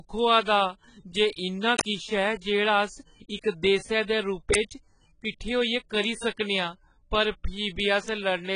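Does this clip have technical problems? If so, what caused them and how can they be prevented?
Yes. AAC compression, likely at a very low bitrate around 16 kbps, dulls the speech throughout. Nothing is heard above 10.5 kHz, and heavy coding damage leaves the sound smeared and warbling. Encoding at a higher bitrate, or uploading a lossless master, would prevent this.

An uninitialised buffer causes short bursts of loud digital noise at 1.79 to 1.81 s and at 4.54 s. In each case the playback path read an audio block before any samples had been written to it, so leftover memory came out as raw noise. The lengths fit blocks of about 20 ms and 10 ms. Zero-filling buffers before use, or holding playback until each block is written, would prevent it.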